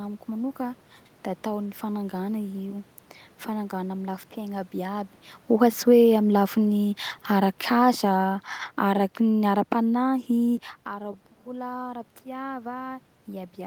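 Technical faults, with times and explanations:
5.48–10.67 s, automatic gain falling: the automatic gain control judges the input too loud, or its background noise too strong, and eases its gain down by about 8 dB over roughly five seconds, ending just before "ara bola". Because the gain acts on the whole signal, the room noise sinks along with the speech. On a waveform the envelope tapers steadily; on a spectrogram every band, including the noise floor between phrases, fades together, unlike the talker's own movements near 5.5 and 10.5 s.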